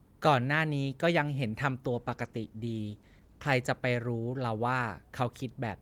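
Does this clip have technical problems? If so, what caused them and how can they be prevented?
Yes. A call bitrate drop runs from 1.91 to 3.59 s, where the speech turns coarser, watery and duller for about 1.6 s, which fits the encoder halving its rate from 32 to 16 kbps after the bandwidth estimate fell. To prevent it, secure a steadier network link or reserve bandwidth for the call.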